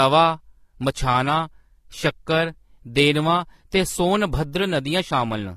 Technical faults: transcoding between lossy codecs

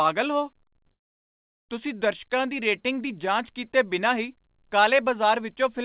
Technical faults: call audio freeze

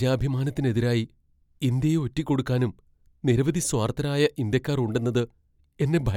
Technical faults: none

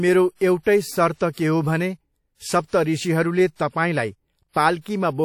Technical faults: WMA compression

